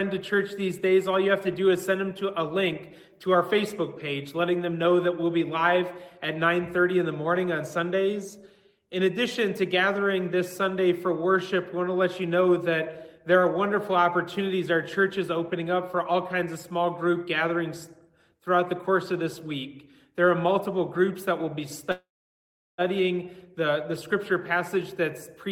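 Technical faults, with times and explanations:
21.91–22.81 s, call audio freeze: the sound stalls for just under a second. The last bit of audio gets stretched out briefly, then it drops to silence for about 730 ms before picking up right where it left off. That pattern most likely comes from packets getting held up in transit, which let the jitter buffer run dry. Nothing is actually lost, but the whole stream now runs about 870 ms later.
24.15–24.81 s, jitter buffer speed-up: after the stall, the receiver is sitting on more buffered audio than it wants, so it trims it back. It snips out tiny pitch-period-sized slices over and over, roughly 40 ms in all across this stretch. That makes the sound play at about 105% speed while the pitch stays put, so it comes across as slightly rushed for a moment.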